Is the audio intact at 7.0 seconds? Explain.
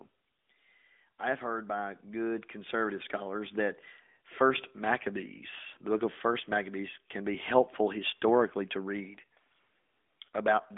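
No. At 7.0 seconds, as throughout the speech, the signal carries AMR narrowband mobile codec damage. The codec samples at 8 kHz and rebuilds the voice from a vocal-tract filter excited by a few pulses per subframe, so nothing above about 3.7 kHz survives and the band sits roughly between 250 Hz and 3.5 kHz. The plainly audible buzzy, synthetic edge fits a mid-range rate near 10 kbps.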